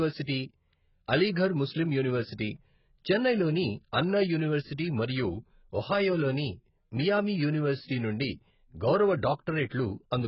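From start to finish the speech sounds dull and smeared, with nothing above 5.6 kHz, fizzy sibilants and a warbling texture on sustained sounds. The likely cause is AAC compression: heavy AAC-LC coding whose narrowed band and patchy spectrum fit a bitrate near 12 kbps.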